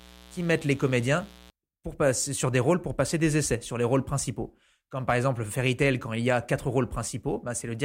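Switching spikes from the 60 Hz supply leak into the signal from 0.0 to 1.5 s, a raspy mains buzz well below the speech that stops just before "pour passer sur des".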